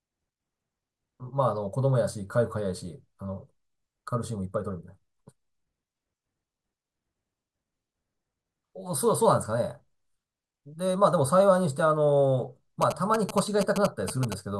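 A 2G phone close to the recording chain was signalling to its network, and the audio circuitry rectified its radio bursts into GSM signalling bursts from 12.82 to 14.34 s. They sound like a galloping dit-dit-dit of short 217 Hz buzzes, only slightly quieter than the speech.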